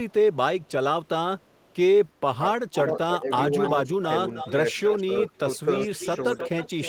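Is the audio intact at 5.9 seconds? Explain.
No. At 5.9 s two faults overlap. An echo leak runs from 2.73 s to the end of the clip. A delayed copy of the speech, arriving about 311 ms after the original and roughly 10 dB below it, sits under the direct sound. This is likely a loudspeaker on the far side whose echo canceller fails to remove what its microphone picks up, so that residue returns down the line.

At the same moment, speech suppressed in double talk affects 5.38 to 5.93 s. The speech on the loudspeaker side dips in short pieces totalling around 150 ms, by as much as roughly 15 dB at the deepest point, while the other side is also talking. The likely cause is an echo canceller that cannot separate the local talker from the loudspeaker echo and attenuates both together.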